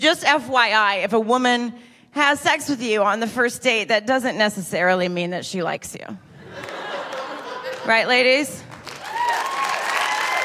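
No technical fault can be heard at any point in the audio. There is nothing here to place on a timeline.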